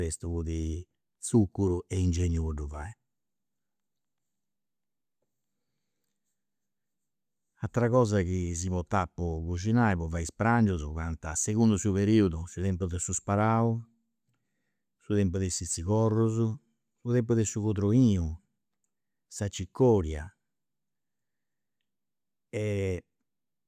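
Nothing in this speech recording stands out as a technical fault, so there's no moment anywhere in it that calls for a closer look.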